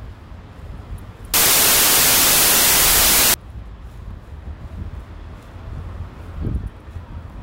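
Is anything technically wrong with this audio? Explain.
Yes. From 1.34 to 3.34 s there is a wrong sample width fault. The sound fits 32-bit samples being read as 16-bit. Each real sample splits into two mismatched values, so loud noise buries the original, which plays at half speed, an octave low.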